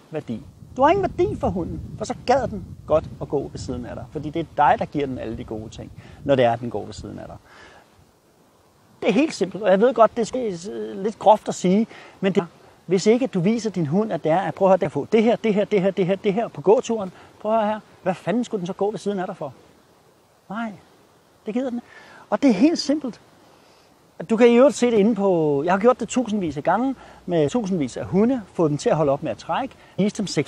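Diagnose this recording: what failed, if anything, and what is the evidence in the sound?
Codec stage, compressed frames skipped: the audio jumps ahead at 10.34, 12.38–12.40, 14.84, 21.78–21.80, 27.47–27.49 and 29.98 s, losing about a tenth to half a second each time. Each skip is a multiple of a frame of roughly 23 ms.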